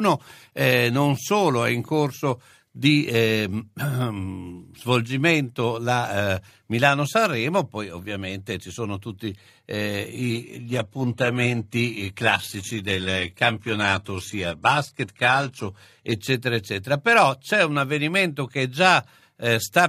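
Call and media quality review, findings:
Adaptive stream at a lower bitrate, 10.18–16.18 s: sudden switch, no gap; codec artefacts rise. Player dropped to a lower rendition, fits 16 kbit/s HE-AAC.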